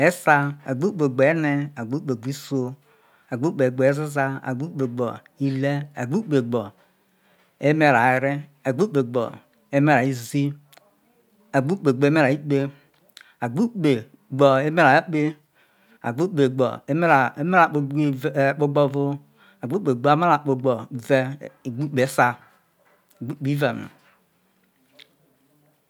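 No technical fault can be heard anywhere in the recording, and the signal holds steady throughout the speech.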